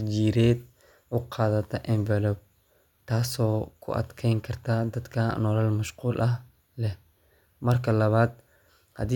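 No technical faults can be heard anywhere in the speech.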